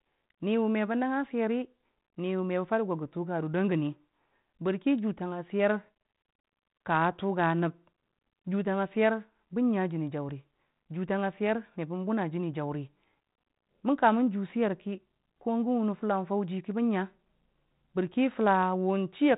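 Nothing stood out as a fault on listening to this speech.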